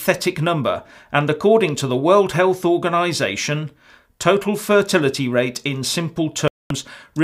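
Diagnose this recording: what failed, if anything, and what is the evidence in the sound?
A digital broadcast dropout at the receiver muted lost frames. The sound cuts to silence from 6.48 to 6.71 s, a gap that fits about seven missing frames.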